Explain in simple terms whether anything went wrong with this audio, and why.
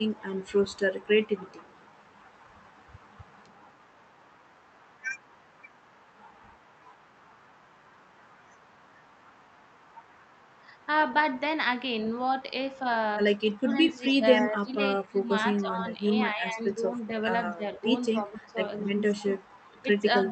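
Two things went wrong here, and both come from the call's echo handling.

The first is echo leak. A faint, delayed copy of the speech follows the talker about a quarter of a second behind. It runs from the start to 7.61 s, then returns from 13.47 to 15.22 s, briefly at 16.67 s, and from 18.16 s to the end. The likely cause is a loudspeaker on one end. Its microphone picked the call back up, and the echo canceller didn't catch all of it.

The second is speech suppressed in double talk. From 13.49 s to the end, the talker's voice sinks and becomes noticeably quieter at its lowest points. This stretch overlaps the returning echo. That likely means both sides were talking at once, and the echo canceller, unable to tell them apart, turned its own talker down along with the echo.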